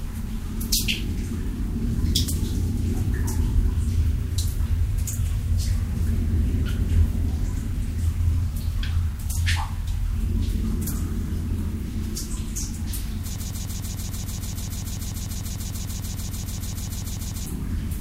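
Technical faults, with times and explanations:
13.36 to 17.46 s, broken-record loop: a chunk of sound about 0.15 s long starts repeating exactly, back to back, 28 times over about four seconds, so you get a rapid, mechanical stutter instead of whatever should have played there. That material is just gone. The cause is likely a stall somewhere in playback, encoding or streaming, with the last fragment held in memory being sent again and again until things recover.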